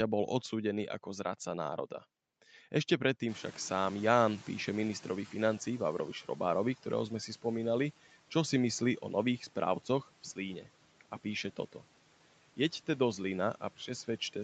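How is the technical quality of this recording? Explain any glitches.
The recording has one glitch. From 3.28 to 6.75 s, the noise suppressor is catching up: the room noise jumps sharply around 3.5 s, the suppressor's noise estimate lags for about 3.5 s, and the noise comes through with less reduction before sinking by about 10 dB.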